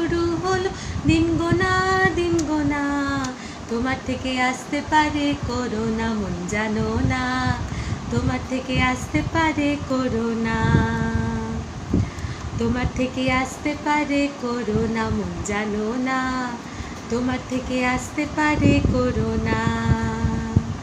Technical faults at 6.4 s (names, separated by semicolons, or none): none